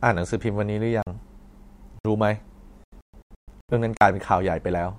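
Blocks of digital silence break into this speech recording at 1.02 to 1.07 s, 1.99 to 2.05 s and 3.97 to 4.01 s. The gaps last about 43 ms, 60 ms and 43 ms. In each one the signal drops straight to silence and returns with no fade, and the gap is heard as a short hole. The 43 ms gaps fit a 2048-sample buffer that the playback program failed to fill in time. A digital broadcast dropout follows from 2.84 to 3.74 s. The receiver stopped getting frames it could decode and muted until valid ones arrived again. Instead of one clean gap, the sound breaks up into several holes across roughly 850 ms. About 512 ms of audio is missing, and the longest single silent stretch is 128 ms. The speech sent during those holes never comes back.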